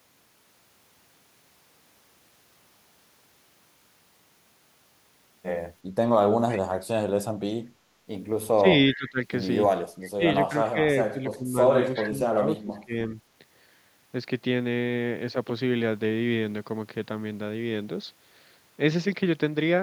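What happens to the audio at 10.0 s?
A faint, delayed ghost of the speech flickers in from 10.01 to 10.07 s: a brief scrap trailing the original by 360 ms and sitting roughly 25 dB below it, so it registers as a thin shadow more than a clear repeat. This is an echo leak, most likely from a far end on loudspeaker whose echo canceller let part of what its microphone captured slip through and travel back down the line.

Right after, from 10.09 to 10.79 s, the speech dips and breaks up in pieces, losing level in short bursts that add up to about a third of a second, with the deepest drops around 20 dB. That is speech suppressed in double talk, likely caused by both sides talking at once: the echo canceller could not tell the local talker from the returning loudspeaker signal, so it turned everything down together.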